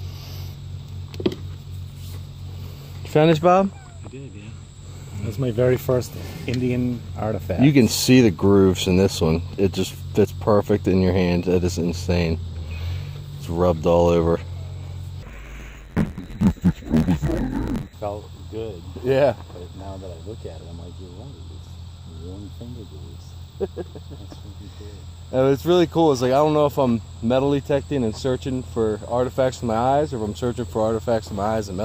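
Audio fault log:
15.23–17.94 s, interleaved audio read as planar: each 11.6 ms block, fitting a 512-sample block, splits wrongly across channels and plays at half speed, sounding dull and robotic with an 86 Hz buzz, seen as 11.6 ms vertical striping and blocky waveform.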